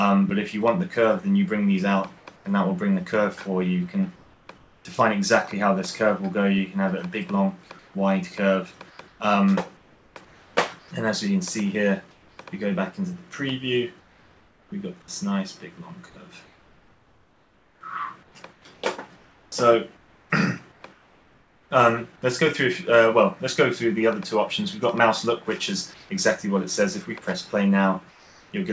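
Comfort noise in place of the background appears within 2.18–2.45, 4.16–4.85, 7.79–12.38, 14.00–14.72, 16.46–21.71, 25.94–26.09 and 28.10–28.52 s. The likely cause is discontinuous transmission, with the receiver substituting smoother synthetic noise during pauses. In three of these pauses the noise is about 1 to 3 dB quieter. On a spectrogram these patches look like even, featureless noise bands with nothing above 8 kHz, consistent with the G.722 call path.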